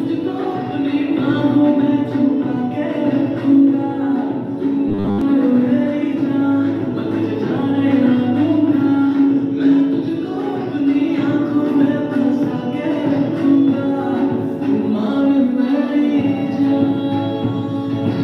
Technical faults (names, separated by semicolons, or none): robotic sound from repeated short buffers